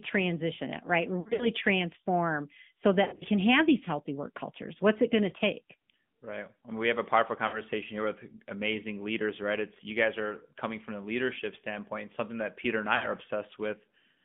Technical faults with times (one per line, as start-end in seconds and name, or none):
0.00-14.25 AMR narrowband mobile codec
1.20-1.48 lost AMR speech frames
3.04-3.24 lost AMR speech frames
7.48-7.61 lost AMR speech frames
12.96-13.10 lost AMR speech frames